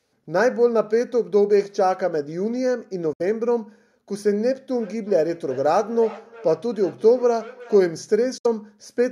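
Bluetooth dropout at 3.13 to 3.21 s and again at 8.38 to 8.46 s: the speech cuts to silence for about 64 ms each time, then resumes further on, most likely because packets reached the headphones too late and were discarded. Feedback echo between two devices from 4.76 to 7.92 s: a second device's playback is picked up by a nearby microphone and sent back, so the speech returns roughly every 400 ms, thinner and ringing, peaking about 20 dB below the speech.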